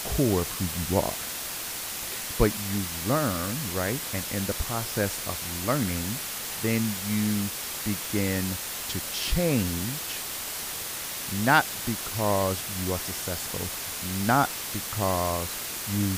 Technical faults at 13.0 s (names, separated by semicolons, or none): low bit depth with dither